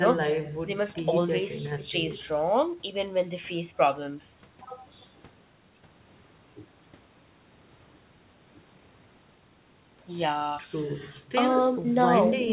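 No technical faults can be heard anywhere in the clip. The speech comes over a call path with nothing above 4 kHz, a narrowband sound that fits G.711 mu-law at 64 kbps.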